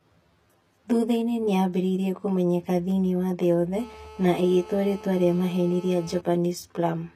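Right through the speech there's a hollow, phasey colouring. That's channel delay (comb filtering): one channel arrives around 10 ms late, and summing to mono cancels shared content at evenly spaced notches, the first sitting around 40 Hz.

Also throughout, the codec damage is plainly audible and nothing reaches above 14.9 kHz. That points to HE-AAC compression, likely at around 24 kbps, with the treble rebuilt from copied lower bands instead of carrying the original detail.

Right after "thĩinĩ wa thĩ yothe", from 3.79 to 6.2 s, a GSM phone buzz appears. It's a raspy 217 Hz buzz with many harmonics, about 20 dB below the speech and steady, as from a phone on a call rectifying its transmit bursts.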